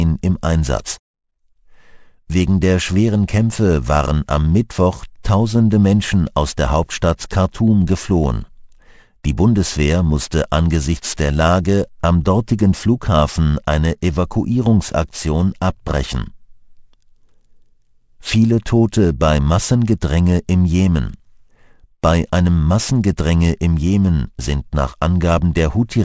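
Aliasing runs through the whole clip, from start to finish. The audio was brought down to a lower sample rate without an anti-alias filter first, which fits a drop from 48 kHz to 16 kHz. Everything above the new 8 kHz limit folds back below it, landing at unrelated frequencies and sitting roughly 25 dB under the main signal. High, bright content turns gritty and metallic, and the spectrum stays dense right up to the 8 kHz edge.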